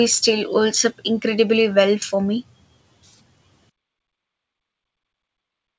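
From 3.70 s to the end of the clip at 5.78 s, the fade-out turns gritty and grainy as it gets quieter. This is truncation distortion on a fade. The volume stage dropped bits without dither, which fits roughly 7-bit resolution, so the low-level waveform collapses into coarse square steps.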